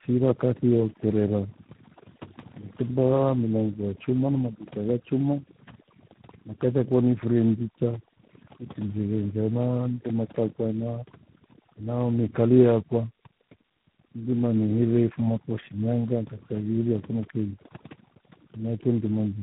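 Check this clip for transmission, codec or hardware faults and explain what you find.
Two faults run through the whole clip.

Overdone noise removal, throughout: frequency bands near the noise floor are pushed down hard. The background drops and breaks up into twinkling specks.

Tandem speech coding, throughout: the speech sounds as though three speech coders worked in turn, each on the last one's output. Nothing reaches above 3.9 kHz, and the speech is rough, muffled and warbly.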